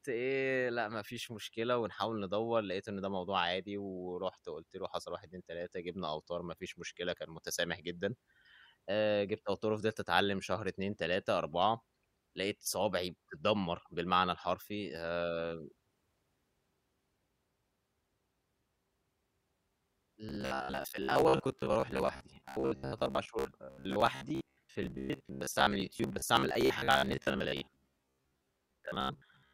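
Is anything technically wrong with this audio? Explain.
Yes. From 20.29 s to the end at 29.53 s, the speech has robotic sound from repeated short buffers. It turns into a rigid, metallic buzz at 66.8 Hz, likely from a roughly 15 ms block being replayed, with about half the audio repeated instead of new.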